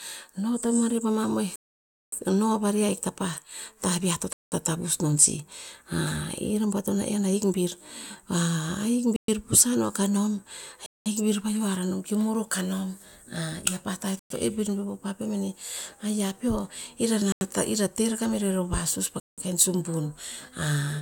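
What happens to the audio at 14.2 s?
A Bluetooth stall, most likely: packets held up by interference let the headphones' buffer run empty, so the speech drops to silence for 110 ms, from 14.19 to 14.31 s, then resumes.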